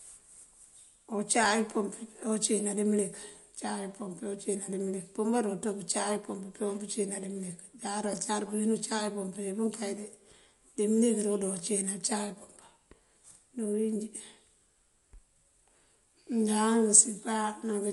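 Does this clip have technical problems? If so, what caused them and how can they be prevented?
Yes. Throughout, the speech sounds watery and swirly, with smeared consonant attacks and no content above 11.3 kHz. The likely cause is MP3 compression: short of bits, the encoder cuts the treble and drops weak frequency lines that flicker between frames, which points to a low bitrate near 48 kbps. Encoding at a higher bitrate, or keeping a lossless copy, would prevent it.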